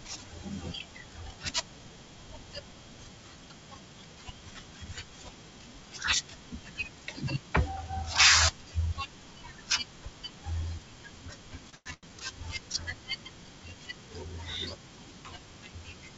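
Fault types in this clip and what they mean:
Short stall from a late packet: the sound is held too long at 11.70 s for about 30 ms and again from 11.94 to 12.10 s for about 91 ms. The late packet is bridged by stretching the last sound, which stays sustained rather than fading away.
Call audio freeze: from 11.75 to 11.88 s the sound turns into a buzz or hiss that fades, about 108 ms of fill ending in about 30 ms of silence, likely because packets were held up and the jitter buffer emptied. The fade to silence separates it from a stall.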